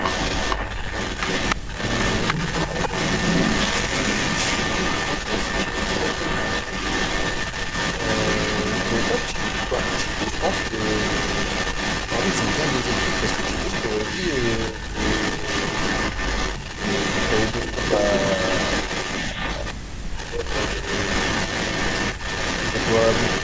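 From 0 to 19.74 s and again from 20.15 s to the end, an echo leak runs under the speech. A second copy trails it by 291 ms at roughly the same level, likely from a loudspeaker echo the far-end canceller missed. On a spectrogram every syllable's harmonic pattern repeats about 0.29 s later, smearing gaps within the 8 kHz band.

Speech suppressed in double talk cuts in at 1.55–1.79 s and 19.6–20.47 s as near-silent holes, down about 40 dB. Shallower dips of about 10 dB at 14.71–14.96 s and about 5 dB at 15.38–15.46 s and 20.76–20.86 s show as brief envelope sags. The likely cause is the canceller ducking both voices.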